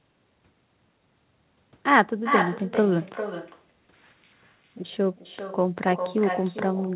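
From start to finish, the speech carries an echo with no canceller. The far end evidently played the call through a loudspeaker, its microphone picked that up, and nothing removed it, so each phrase returns roughly four tenths of a second later, about 7 dB quieter and thinner. On a spectrogram every speech burst has a fainter, delayed duplicate trailing it. The whole band stops at 4 kHz, which fits a narrowband telephone codec.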